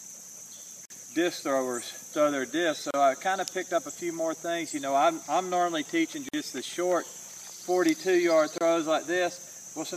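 The sound drops out four times, at 0.85 to 0.90 s, 2.91 to 2.94 s, 6.29 to 6.34 s and 8.58 to 8.61 s, for roughly 28 to 49 ms each. These are gaps at the joins of separately encoded pieces: untrimmed encoder start delay and last-frame padding leave silence at each splice. On a waveform each is a flat, near-empty notch with slightly softened edges; on a spectrogram, a thin blank vertical stripe across all frequencies, with the sound resuming unchanged.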